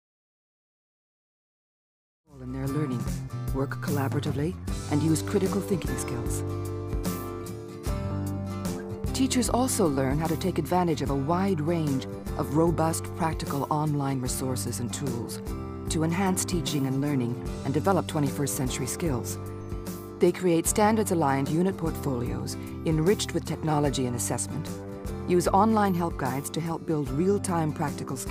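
No technical faults can be heard in the signal, whose level rises gradually from around 2 s and reaches full level by 2.83 s without any step or click.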